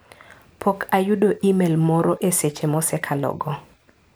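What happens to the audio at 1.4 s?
Nothing goes wrong at 1.4 s; the speech runs straight through that point with no dropout, click, glitch or other fault.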